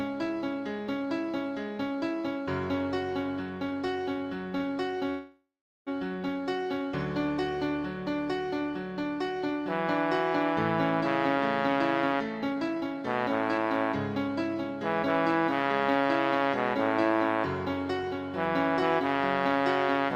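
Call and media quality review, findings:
Short stall from a late packet, 4.58–4.62 s: packet missed its playout slot, jitter buffer ran dry. Receiver stretched the last sound about 22 ms, then resumed at the same point. Nothing lost, but playout delay up 22 ms. Audible as a brief hold with slight buzz or dip.

Call audio freeze, 5.10–5.89 s: jitter buffer emptied, likely packets held up in transit. Concealment continued the last sound as a fading buzz or hiss, with about 400 ms of silence before resumption. 769 ms inserted in total, nothing missing; delay grows by 769 ms.

Jitter buffer speed-up, 11.35–16.49 s: buffer over target. Receiver trimmed short pitch-period pieces repeatedly, about 0.4 s removed. Playback at 108% speed, same pitch, noticeably hurried.

Jitter buffer speed-up, 18.13–20.06 s: second, gentler drain of surplus buffered audio, around 70 ms cut. Playback at 103%, pitch unchanged.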